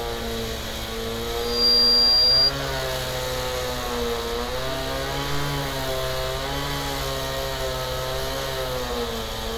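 A recording of everyday sounds, marred by loudspeaker feedback squeal. At 1.39 s a single tone near 4.8 kHz appears. It swells over roughly a third of a second. It then sits around 10 dB above the surrounding sound until 2.52 s. A microphone was hearing the loudspeaker it fed. At that one frequency the loop's gain passed unity. So the tone fed on itself and grew.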